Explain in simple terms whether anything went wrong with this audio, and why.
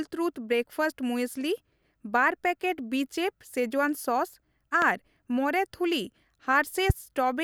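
Two loud pops break into the speech, one from 4.82 to 4.85 s and a stronger one from 6.90 to 6.92 s. Each is a single sharp thump lasting under a thirtieth of a second, most likely from a sudden electrical jolt such as a plug, switch or static discharge. Unlike a dropout, where the sound cuts out, here the speech carries on underneath and the pop sits on top of it.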